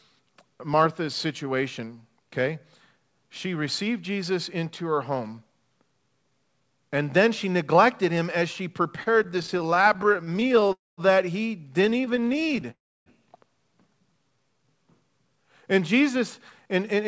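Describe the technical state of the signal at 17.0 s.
A jitter buffer speed-up runs from 16.65 to 17.08 s. The receiver trims pitch-period-sized slices, around 40 ms in total, to drain excess buffered audio, so the speech plays about 8% faster at unchanged pitch and sounds hurried.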